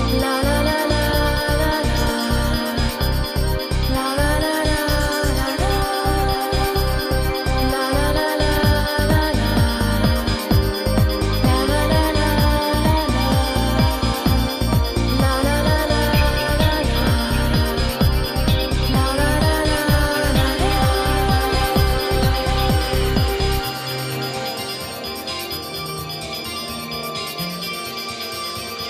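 No technical faults can be heard anywhere in this audio. Nothing in it points to a problem with how the sound was captured, processed or passed along.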